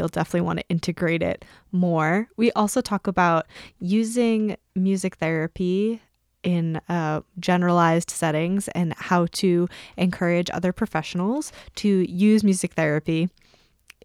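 A sudden gain jump occurs between 3.55 and 3.69 s, right after "also talk about" and before "using music therapy in". For that stretch the level rises by about 6 dB in a single step, with no fade in or out. The background noise lifts along with the speech, which gives it away as a change in digital gain rather than louder talking. The likely cause is a gain setting or bit shift applied instantly instead of ramped.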